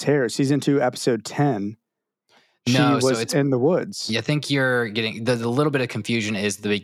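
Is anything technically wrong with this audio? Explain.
No, nothing in this speech recording stood out as a technical problem on listening.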